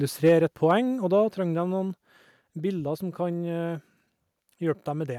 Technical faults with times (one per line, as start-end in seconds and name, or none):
0.25-0.33 microphone overload
0.29 microphone volume stepped down
0.70-0.72 microphone overload